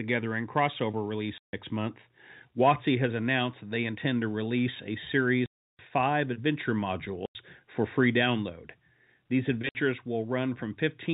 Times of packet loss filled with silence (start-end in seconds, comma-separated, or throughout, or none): 1.38-1.53, 5.46-5.79, 7.26-7.35, 9.69-9.75